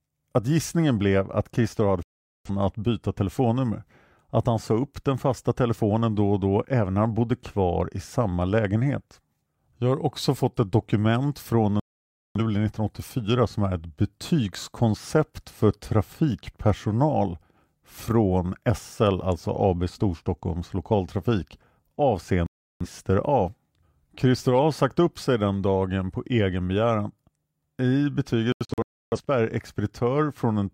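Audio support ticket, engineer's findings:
Digital broadcast dropout: speech mutes at 2.03–2.50 s, 11.80–12.40 s and 22.46–22.86 s, plus scattered holes over 28.52–29.19 s. Receiver lost signal or frames failed checksum; output muted until clean frames returned, and the content in the gaps is gone.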